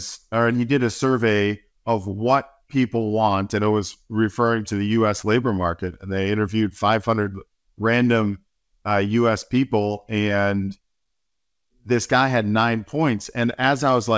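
Speech with no technical faults to report. It has passed through a WebRTC call path, and nothing is heard above 8 kHz, which fits a wideband codec such as G.722.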